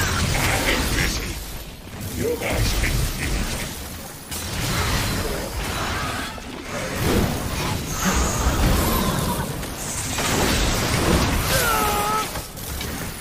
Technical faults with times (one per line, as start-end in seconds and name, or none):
0.00-13.21 sample clock jitter